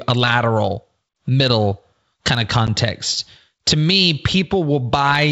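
At 2.67 s, packet loss on the ADPCM call drops a single packet, a 10 ms hole filled with silence, leaving the decoder's predictor and step size out of step with the sender's. The speech cuts off hard, then returns with slight distortion that settles within tens of milliseconds.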